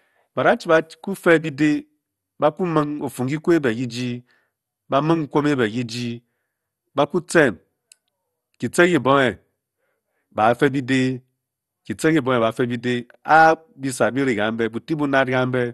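From start to end, the speech carries MP2 compression damage. Nothing sounds above about 12.1 kHz, so it is dull. Coarse quantisation gives a gurgling, granular edge. This is likely MPEG Layer II at a low rate, consistent with about 64 kbps, starving the upper sub-bands of bits.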